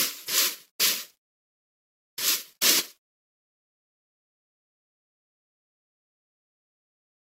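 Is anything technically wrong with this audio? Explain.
Yes. At 2.29 s a brief blip and a jump forward can be heard. This is compressed frames skipped: roughly one frame, about 30 ms of audio, was never played.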